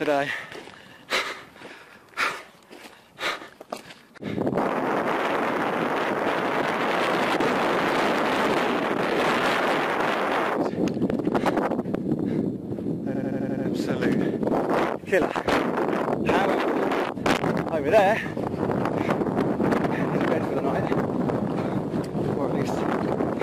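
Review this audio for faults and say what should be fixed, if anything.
At 13.14 s the host stalled while the audio hardware kept replaying its ring buffer, a system hang loop lasting until 13.65 s. One 85.33 ms slice of sound repeats exactly six times, which fits a 4096-sample buffer. At a loop rate of 11.7 Hz this comes across as a machine-gun stutter rather than a buzz, and about half a second of the real audio is lost in its place. To prevent it, keep the audio thread free of blocking calls and have the driver output silence rather than stale buffer contents when it is starved.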